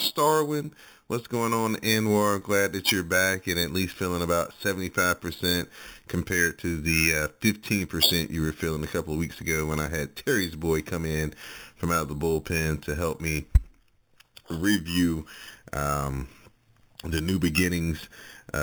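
From start to finish the speech carries imaging from sample-and-hold upsampling. It points to audio at 8 kHz being raised to 48 kHz by simply repeating each sample with no smoothing filter. Mirrored copies of the speech spectrum fold upward, the first filling 4 to 8 kHz at about 11 dB below the signal, heard as a metallic fizz. Unlike steady hiss, it rises and falls with the speech, and its lowest band moves opposite to the pitch.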